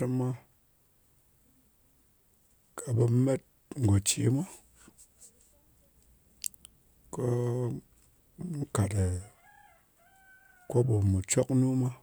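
No technical faults can be heard anywhere in the recording.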